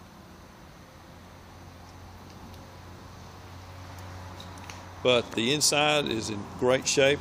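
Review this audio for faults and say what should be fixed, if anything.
Nothing here needs fixing; I listened all the way and didn't hear a single fault worth flagging.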